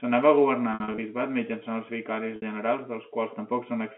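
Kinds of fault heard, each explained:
Packet loss with pitch repetition: the receiver bridges missing stretches by looping the last pitch period, so gaps sound held and buzzy rather than silent or clicking, which sets this apart from a plain dropout. From 0.74 to 0.98 s, just before "bisbat mitjançant els vicaris", about 140 ms goes missing in scattered runs of up to 60 ms. At 2.36 to 2.42 s, just after those words, a single 60 ms gap is covered the same way.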